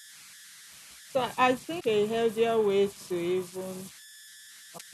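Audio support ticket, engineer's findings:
Converter idle tones, throughout: whistle around 2 kHz in pauses, grainy noise under quiet speech, about 21 dB below signal. Component: delta-sigma converter running without dither, stuck cycling repeating bit patterns at low input. Differs from mains hum or fixed interference: pitch set by input offset, not by the mains frequency.

Damaged data in a compressed stream, 1.77–1.85 s: short burst of decoding error. Decoder misread corrupted frames, lost sync, skipped to the next header. Same at 4.74–4.81 s. Unlike the idle tones: brief, isolated bursts, not a continuous tone.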